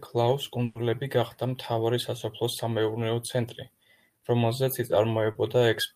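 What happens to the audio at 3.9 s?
Nothing goes wrong at 3.9 s; the speech carries on intact through that moment with no dropout, click or distortion.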